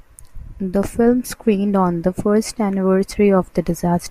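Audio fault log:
No audible faults detected.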